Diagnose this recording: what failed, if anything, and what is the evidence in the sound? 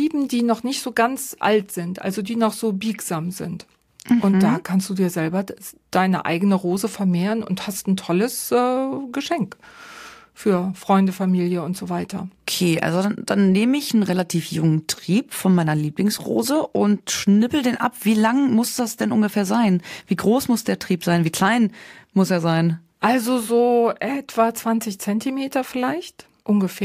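Nothing failed, and the sound gives no evidence of any fault.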